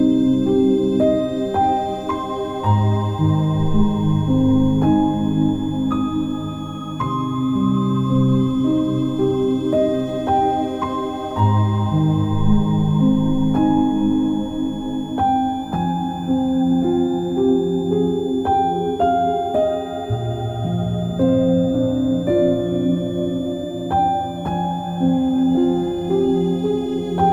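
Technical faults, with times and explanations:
Throughout, switching supply whistle: a switching power supply in or near the recording chain is cycling at an audible rate, dropping into burst mode or beating against a second supply, so its switching energy lands in the audio band. The result is a thin, high whistle wandering between about 3.35 and 3.61 kHz as the load shifts, sitting roughly 25 dB below the sound and never letting up.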